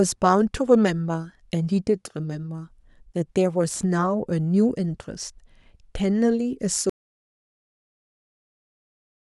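At 3.70 s a short burst of processor overload crackle runs until about 3.83 s. Audio arriving in buffers of well under a millisecond missed its deadlines a handful of times in quick succession, and each miss left a tiny hard-edged gap of silence. Those clustered gaps are heard as a gritty tearing over the speech, not as one clean cut. That is what separates this crackle from a real dropout: the sound keeps going underneath while the tearing lasts.

From 6.90 s to the end of the clip the speech cuts off into complete silence, an audio dropout to silence. No room tone or hiss remains. The gap is silent, which sets it apart from a quiet pause, where some background would normally remain. The likely cause is that the input was lost, through a disconnected device or a failed link, while the recording went on writing empty samples. Nothing returns before the clip ends.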